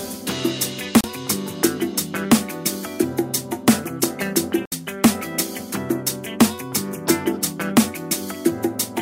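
At 1.01 to 1.04 s and 4.66 to 4.72 s, a digital broadcast dropout mutes the receiver for about 32 ms, then 64 ms, consistent with one and two lost 32 ms frames. The gaps are clean silences with no smeared concealment.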